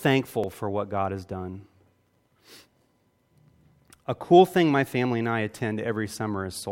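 At 0.44 s, just before "for what", the speech jumps ahead by around 10 ms, likely a dropped buffer (overrun) splicing both sides together.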